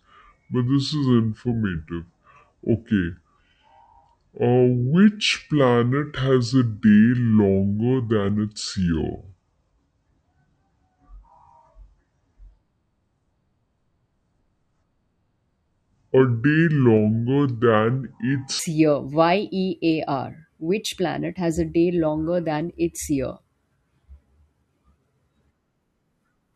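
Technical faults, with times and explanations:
0.00 to 18.59 s, section at the wrong speed: the speech plays at 0.636 times normal speed, so it drags and sits about seven semitones lower. Pitch and tempo fall together, unlike a pitch shift or time-stretch, which likely points to a wrong playback clock.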